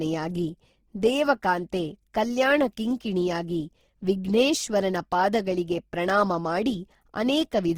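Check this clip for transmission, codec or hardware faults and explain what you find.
One coding fault runs through the whole clip.

From start to end, the speech sounds grainy, rough and plainly noisy, though the top end reaches about 20.3 kHz. The likely cause is Opus compression in its music (CELT) mode at a rate fitting 16 kbps. It keeps each band's energy but fills starved bands with noise or folded copies of lower ones.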